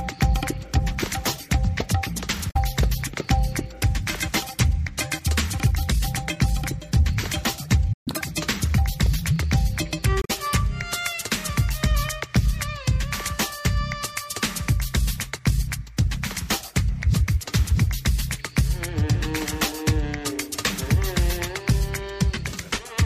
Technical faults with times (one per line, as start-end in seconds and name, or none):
2.47-2.56 damaged data in a compressed stream
7.93-8.08 playback stall
8.08-8.21 catch-up at higher speed
10.20-10.31 damaged data in a compressed stream